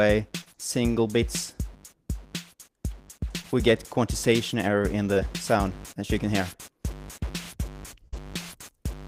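The audio has short concealed packet loss three times: at 0.41 to 0.48 s, where about 40 ms went missing and 43 ms was filled, and at 3.42 to 3.46 s and 5.14 to 5.18 s, each a 20 ms hole. The receiver extended the preceding sound and blended straight back, leaving only a brief smear or wobble. A burst of packet loss at 8.08 to 8.14 s is different. It is a run of consecutive lost packets. The receiver held the last sound for 46 ms while fading it, which is heard as a sustained buzz or hiss. The sound then resumes further on with about 40 ms gone rather than smoothly rejoining.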